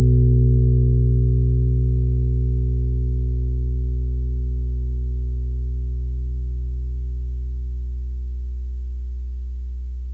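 No technical faults can be heard anywhere in the recording. It has passed through a call's microphone processing, which trims the lowest bass and leaves nothing above 8 kHz, as such a path normally does.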